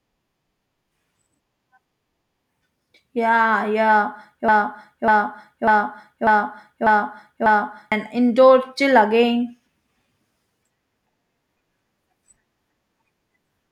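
Speech with a broken-record loop from 4.48 to 7.92 s: a fragment of about 0.6 s repeats exactly six times back to back, and the speech due in that span is lost. The waveform and spectrogram show identical blocks tiled side by side. A stalled player or stream is the likely cause.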